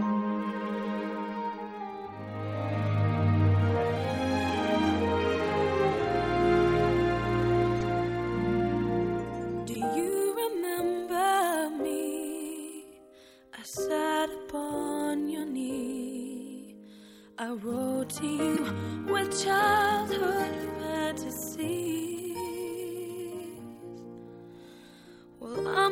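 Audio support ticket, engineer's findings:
Corrupt frame decoded: short glitches at 7.79–7.83 s, 9.72–9.76 s and 18.49–18.59 s, the last longest and loudest (about −15 dBFS). Probable component: decoder or transport, playing bit-flipped frames whose misread gains place energy at wrong frequencies. Spectrogram: brief out-of-place smears; waveform: irregular spikes.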